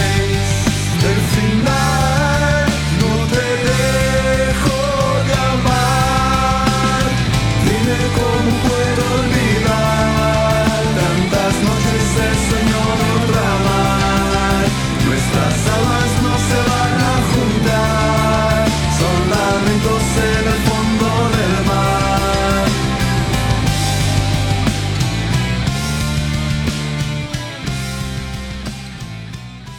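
From 9.59 to 16.71 s a train of clicks runs over the sound. The pulses come regularly, about 7.7 per second, roughly fifty in all. Each peaks about 5 dB above the audio. They tick through pauses too. Interference from nearby equipment is the likely cause.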